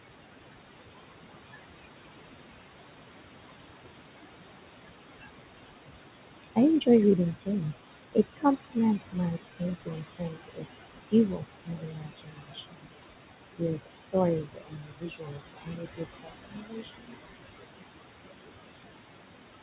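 Noise suppressor artifacts run through the whole clip. The room noise sits only about 8 dB below the speech, and the suppressor pulls it down by about 20 dB between phrases and lets it rise again under them. Speech cut by the noise suppressor occurs at 5.21–5.30, 6.43–6.88, 7.33–7.63, 7.95–8.77, 9.12–10.66, 11.10–13.07 and 13.57–17.15 s. In these stretches the suppressor treats parts of the speech as noise and drops them by about 17 to 22 dB, so they sound swallowed and faint. The last three stretches each lose a second or more.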